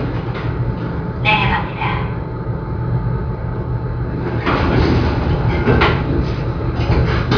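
No technical faults are audible.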